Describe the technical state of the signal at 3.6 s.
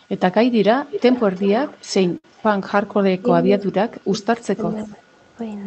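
At 3.6 s the speech dips sharply, losing a deep, roughly 25 dB, portion in pieces between 3.43 and 4.59 s: speech suppressed in double talk, likely an echo canceller turning down this side's voice along with the loudspeaker echo.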